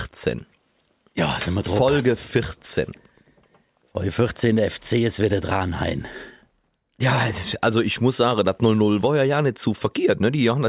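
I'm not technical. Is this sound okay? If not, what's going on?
Yes, the sound is technically okay, with no dropouts, glitches or other technical faults to be heard anywhere in the recording.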